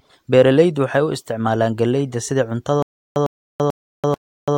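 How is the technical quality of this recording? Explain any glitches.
The recording holds up until 2.82 s, then hits a stutter with silent gaps that runs to the end. A roughly 103 ms burst repeats four times, each followed by about 336 ms of dead digital silence, so it pulses every 439 ms. That's likely a stalled playback buffer replaying its last fragment on each retry while the audio that should have followed is lost.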